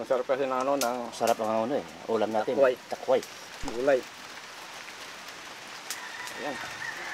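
At 3.64 s a phantom power thump appears: a supply switched on or off on a live input sends a DC step through the coupling capacitors. It peaks near -26 dBFS, decays within about 64 ms, and fades by 3.92 s. Unlike handling noise, it's a single clean low thud without rustle.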